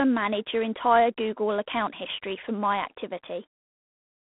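The whole way through, there's that harsh, rasping G.726 ADPCM hiss riding the speech level, which fits 24 kbit/s coding, and nothing gets past about 3.8 kHz.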